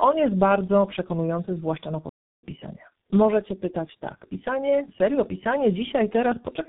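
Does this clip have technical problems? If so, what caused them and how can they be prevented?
Yes. Throughout the speech there is tandem speech coding: the audio passed through three speech codecs in a row, AMR-NB at 12.2 kbit/s, G.726 at 32 kbit/s and finally G.723.1 at 6.3 kbit/s, with G.711 A-law links between them. Each coder re-encodes the previous one's errors, so the roughness, muffling and warble add up. One low-rate codec alone would sound dull but steadier; here the artefacts are layered and more warbly than G.723.1 would produce by itself. To prevent it, keep the call in one codec end to end through transcoder-free operation or codec negotiation, so it is decoded only once.

There is also a playback stall from 2.09 to 2.43 s, right after "bardzo przekonujący zwłaszcza na". The speech stops dead for about 337 ms and then resumes. The likely cause is that the player ran out of buffered data or its output thread was blocked. 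A network dropout would typically be masked by concealment noise or a smeared repeat of the last sound, but this gap is clean silence, the signature of the player itself stalling. To prevent it, give the playback path a larger jitter buffer and a high-priority audio thread that nothing else can block.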